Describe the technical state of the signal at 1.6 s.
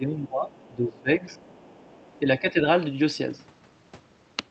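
At 1.6 s the other side's voice is leaking through, a faint second voice running from 1.29 to 2.18 s and sitting far below the main talker. The likely cause is a far-end loudspeaker feeding the microphone, with the echo canceller leaving a residue. On a spectrogram it shows as weak, separate harmonic traces beneath the dominant speech bands. The waveform shows almost no change because the leak is so much quieter.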